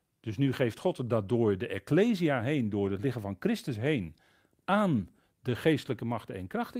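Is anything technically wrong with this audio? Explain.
Yes. There are three lost packets rebuilt from error correction in this speech, at 1.77–1.79 s (just after "dat door de"), 2.85–2.87 s (just before "het liggen van"), and 4.97–4.99 s. Each 20 ms stretch, consistent with one lost packet, was replaced by the low-bitrate redundant copy carried in the next packet, so nothing drops out. Each one sounds like a brief rough, noisier grain. On a spectrogram, look for a thin 20 ms column of smeared, grainier harmonics. The waveform stays continuous, with no gap.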